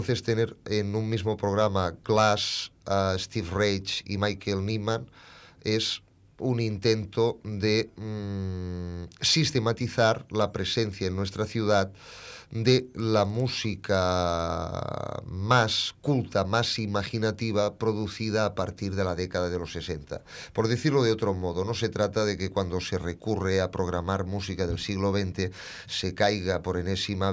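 Resampler restarted on every block, from 12.6 to 14.55 s: each 50 ms block was converted in isolation, consistent with a 48 kHz to 16 kHz conversion, leaving a small error at every block edge. The result is a 20 Hz ticking buzz riding on the sound.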